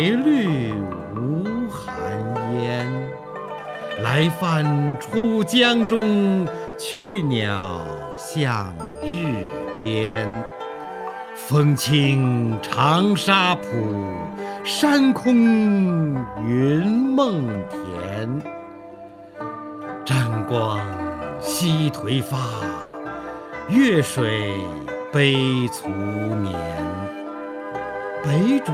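From 4.87 to 6.04 s the audio turns choppy and robotic: repeated packet loss, with four holes totalling 240 ms, none longer than 60 ms, covering about a fifth of the span. Each hole is bridged by extending the preceding sound. On a spectrogram, short stretches of smeared, flattened harmonics interrupt the normal texture, and the waveform shows repeated, slightly decaying cycles where fresh detail should be.

A burst of packet loss follows at 6.67 to 6.76 s, where 60 ms of audio is lost and replaced by a held, fading continuation before the sound resumes further on. It shows as a brief band of frozen spectral lines tapering in level.

From 6.91 to 7.18 s comes a longer hole, likely a network dropout: 240 ms of audio never arrives, and the whole gap is filled by a buzz or hiss that fades without reaching silence. The spectrogram shows a stretched, blurred copy of the prior spectrum dimming across the gap, and the waveform a smooth decaying envelope.

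Further bursts of packet loss at 7.57 to 7.66 s and 8.11 to 8.20 s each remove 60 ms in the same held-and-fading way.

Repeated packet loss returns more heavily from 8.83 to 10.54 s: seven gaps totalling 600 ms, the longest 120 ms, concealing about 35% of the span. This makes the stretch choppy, with many smeared patches visible in the spectrogram.

A final burst of packet loss at 22.81 to 22.96 s drops 120 ms, bridged by a fading continuation with no silence.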